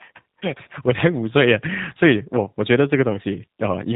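From start to finish the speech carries G.729 codec damage, plainly audible, with the sound pointing to an 8 kbit/s low-rate coder. Instead of the waveform itself, each 10 ms frame is rebuilt from a vocal tract filter, a pitch predictor and a few coded pulses. Everything above 4 kHz is missing, so the audio is dull and lacks sibilance, and the voice has a rough, slightly synthetic texture from the sparse excitation.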